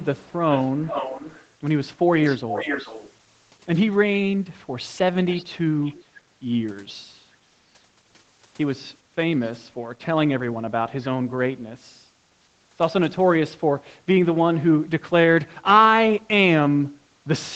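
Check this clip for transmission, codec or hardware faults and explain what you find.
One fault is audible, echo leak, in five stretches: 0.00–0.33, 0.50–1.48, 2.27–3.13, 5.30–5.45 and 5.83–6.04 s. A delayed copy of the speech trails it by 295, 421 and 521 ms, faint at first and quite loud from 0.50 to 3.13 s. The likely cause is a loudspeaker whose echo canceller let its microphone pickup slip back. Unlike reverb, this is a distinct repeat rather than a smooth decay.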